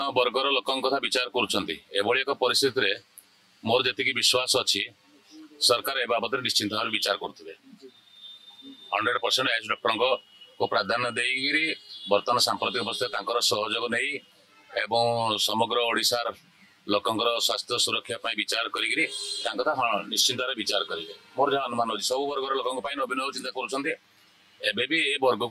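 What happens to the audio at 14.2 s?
At 14.2 s, as throughout, channel delay (comb filtering): one channel lags by roughly 10 ms, so the mono sum notches from about 50 Hz upward, sounding hollow and phasey.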